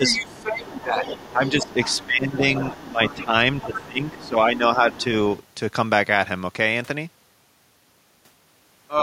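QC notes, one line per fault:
0.00–0.93 s, 1.33–2.44 s, 2.90–4.99 s: speech suppressed in double talk. The talker's level dips by about 10 dB, reaching about 15 dB in the middle run, while a second voice overlaps. An echo canceller, likely unable to separate near speech from echo, pulls everything down. This is lost level, not added sound.
0.10–2.06 s, 2.60–3.24 s, 3.58–4.29 s, 4.91–5.03 s: other side's voice leaking through. A separate, quieter voice sits about 15 dB under the talker, and the brief last scrap is fainter still. It is likely loudspeaker pickup the canceller left in. Unlike the suppression, this adds a voice rather than removing level.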